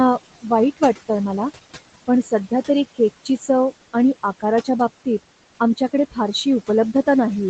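Throughout the speech there are noise suppressor artifacts. The suppressor is pushing the room noise down by about 17 dB, so the background drops away in the pauses and creeps back up under the talking.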